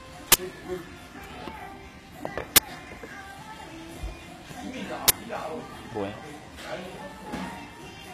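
Throughout, the treble sounds gritty and metallic. This is HE-AAC compression, likely at a low bitrate around 20 kbps. Rebuilt upper bands don't match the original.

At 0.32 to 0.34 s, 2.56 to 2.58 s and 5.08 to 5.10 s come loud bursts of digital noise. Each is an uninitialised buffer: a 20 ms block of leftover memory played as sound.

At 4.51 to 4.53 s and 5.93 to 5.95 s, single loud pops cut through, roughly 15 and 10 dB above the sound. A voltage step or glitch is the likely cause.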